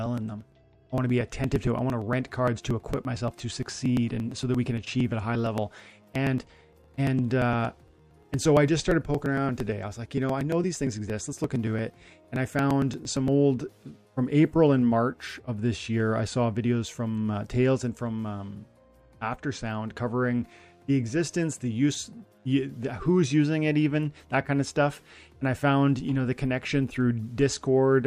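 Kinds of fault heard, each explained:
Periodic USB or driver dropouts: something stalls the USB bus or audio driver every 0.115 s, and roughly 10 ms of audio is skipped each time, leaving around a hundred evenly spaced ticks, nearly nine per second, from 0.06 s to 13.28 s.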